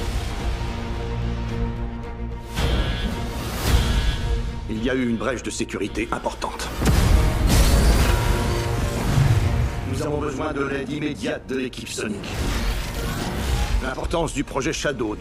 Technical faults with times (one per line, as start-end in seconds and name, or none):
8.04-14.04 channel delay (doubling)